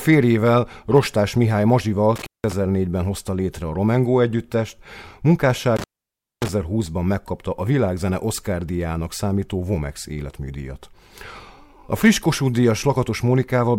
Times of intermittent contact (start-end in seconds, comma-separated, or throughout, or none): 2.16-2.52, 5.76-6.49